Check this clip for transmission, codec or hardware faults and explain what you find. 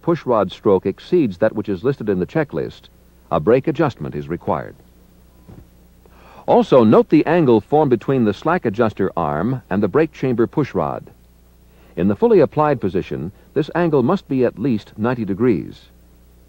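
Nothing in the clip points to a transmission, codec or hardware fault. There are no dropouts, glitches or other artefacts to report at any point.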